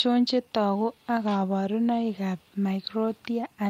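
Clock drift between sender and receiver runs through this speech clip: the sender's audio clock is slow by about 3 percent, so the receiver's jitter buffer keeps draining and must be topped up with repeated material to avoid gaps. The result is small, uneven hiccups and a slightly dragging tempo throughout. Those repeated timing corrections span 0.06 to 3.49 s, each one stretching the audio a little so it plays at 97 percent speed overall. Together they add roughly a tenth of a second, heard as slight stumbles and an unsteady pace.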